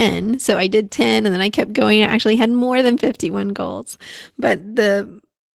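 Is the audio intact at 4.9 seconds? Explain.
No. Opus voice compression runs through the whole clip, including 4.9 s. The speech sounds like hybrid coding at a low rate, around 16 kbps: SILK prediction below 8 kHz with coarsely coded excitation, CELT above, leaving the speech plainly hoarse and slightly robotic.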